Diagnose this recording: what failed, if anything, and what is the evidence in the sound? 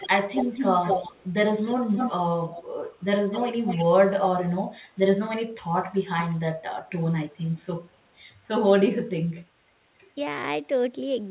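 Echo leak, in call processing. A delayed copy of the speech, about 230 to 245 ms late, sounds at 0–1.31, 1.64–3.86, 4.82–5.28, 6.3–6.39 and 7.44–7.98 s. It is strong early and fades later. Likely an echo canceller letting far-end loudspeaker sound through.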